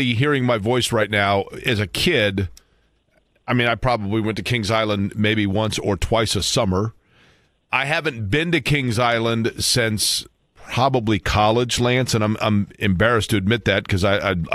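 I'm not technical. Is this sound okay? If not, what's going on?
Yes, this sound is okay, and there's nothing going wrong with it.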